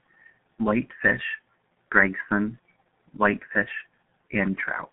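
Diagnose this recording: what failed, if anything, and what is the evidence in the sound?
Codec stage: the G.723.1 codec runs throughout, leaving the speech muffled and hoarse with smeared consonants, which fits a rate near 6 kbit/s. On a spectrogram, energy sits between 150 Hz and 3.7 kHz and is empty above 3.9 kHz. Its 30 ms frames blur transients.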